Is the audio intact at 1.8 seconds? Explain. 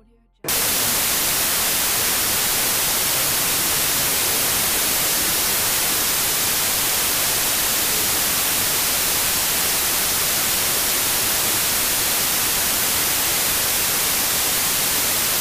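No. A wrong sample width fault runs from 0.49 s to the end. Audio stored as 32-bit samples is read as packed 24-bit ones, so bytes are mismatched. Loud noise buries the sound, which plays at 0.75 times speed, lower in pitch.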